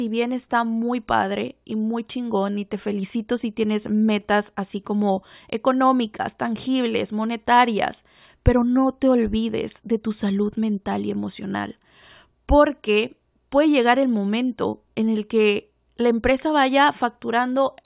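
Nothing to flag in this speech recording; there isn't a technical fault to point to anywhere in it.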